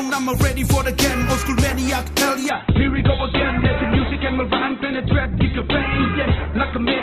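From 2.49 s to the end, the treble abruptly vanishes above 4.1 kHz with no gap: an adaptive stream at a lower bitrate, consistent with a drop to about 8 kbit/s.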